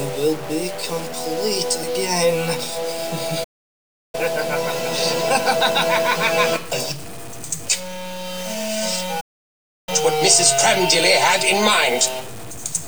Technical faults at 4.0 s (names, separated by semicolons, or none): stuck bit; playback stall